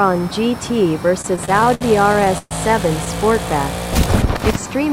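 From 1.21 to 2.53 s the sound drags and catches about a dozen times, the longest hang near 126 ms. These are repeated stalls (stutter): late packets kept emptying the jitter buffer, and the receiver stretched the last sound, about 315 ms in all, losing nothing.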